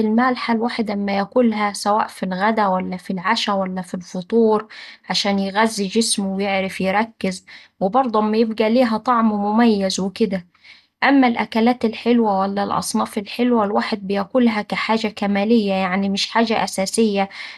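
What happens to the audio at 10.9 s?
At 10.9 s, as throughout the clip, the speech sounds dull and gurgling, likely MP2 compression at around 80 kbps, with upper sub-bands switched off above 12.2 kHz.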